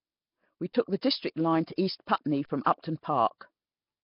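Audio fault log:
Throughout, Nellymoser compression: the speech has a rough, hissy halo and a smeared, underwater quality, with heavy codec damage and nothing above 5.3 kHz. This is likely Nellymoser Asao at about 22 kbps, with fixed two-bit-per-sample coding leaving weak bands noise-filled.
0.73 to 0.75 s and 2.45 to 2.50 s, underrun with held sample: the output buffer ran dry and the converter held its last value, so the waveform flattens for 21 ms, then 43 ms. This fits 1024- and 2048-sample gaps. Roughly 20 ms and 40 ms of live audio went missing.
1.76 to 1.78 s and 2.64 to 2.66 s, pre-echo: a short hiss spreads about 21 ms ahead of each sharp attack. The codec spread quantisation noise sized for the loud onset across its whole block, so the quiet lead-in fills with noise and the attack sounds smeared.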